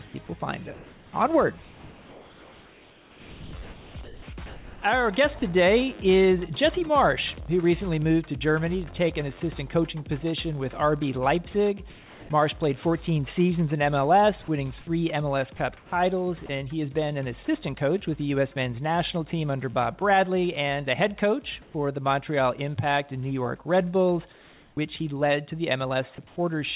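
Between 0.74 and 5.42 s the sound is chopped by the voice detector: sending likely switched on and off repeatedly, and about 3.3 s in total was replaced by synthetic fill. Comfort noise in place of the background appears at 11.9–12.29, 15.77–16.49, 21.62–21.74, 24.32–24.77 and 26.27–26.36 s. In each gap the real background, roughly 24 to 32 dB below the loudest passages, becomes a steady, smoother noise that shifts level by about +1, +4, −2 and −5 dB in the gaps where a change is measurable, likely because the sender paused transmission and the receiver generated the noise. At 16.46–16.49 s the sound is dropped by the voice detector: a brief fragment of real sound, about 10 ms, gives way to noise, likely because a quiet tail was mistaken for background. At 24.75–24.77 s the onset is clipped by the voice detector, so the returning sound starts abruptly without its first 20 ms, likely because the detector was slow to restart transmission. 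The audio carries the band limit of a G.711 A-law call path, with nothing above 4 kHz.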